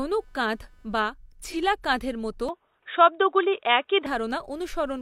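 A faint buzz pulsing around 300 times a second sits well below the speech throughout; this is computer activity noise, with processor or peripheral load disturbing the audio circuit's shared ground.

From 1.44 to 1.56 s, just before "কাঁধ’ এর মতো", the sound smears briefly. This is AAC frame loss with concealment: about 43 ms went missing, which fits a single lost frame, and the decoder patched the gap from the preceding spectrum.

From 2.49 to 4.06 s, just after "কাঁধ’ এর মতো", the speech turns dull and boxy with nothing above 3.8 kHz. The level shifts by about 5 dB and a faint new background noise appears, with no gap at the change. The likely cause is the input switching to a poorer device with a narrower band.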